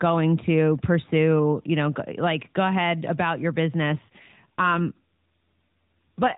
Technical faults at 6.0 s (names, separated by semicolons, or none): AMR rate drop